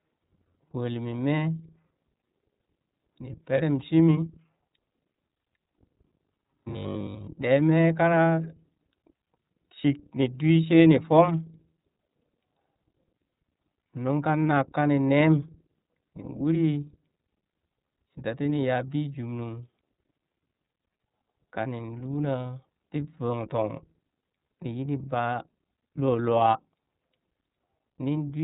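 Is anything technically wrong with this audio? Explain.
Yes, two faults are present.

Throughout, the speech carries iLBC codec damage that is plainly audible. Nothing above 3.8 kHz survives, and each 30 ms frame's excitation is coded independently, giving a rough, slightly synthetic edge. That whole-clip texture separates it from a brief dropout or glitch.

From 5.69 to 7.29 s the speech turns into a rigid, metallic 50 Hz buzz: robotic sound from repeated short buffers. The likely cause is audio arriving too slowly, so the last 20 ms gets replayed while most of the real audio is skipped. The fixed pitch distinguishes it from ordinary codec roughness.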